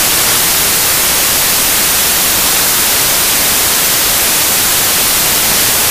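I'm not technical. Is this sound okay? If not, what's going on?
No. The whole clip is loud hiss, from samples built from the wrong bytes: the player misreads each sound value, so tiny details become huge noise.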